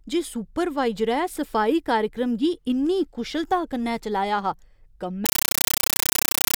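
Compressed stream played as audio, from 5.26 s to the end at 6.57 s: the speech gives way to very loud, chattering static. An AC-3 bitstream, one that fits a 448 kbps stream, reached the output as if it were ordinary samples, with nothing decoding it. Each coded frame becomes a burst of noise about 9.3 ms long followed by silent padding, repeating at 31.25 Hz, and that steady rhythm is what gives the static its harsh, buzzing chatter.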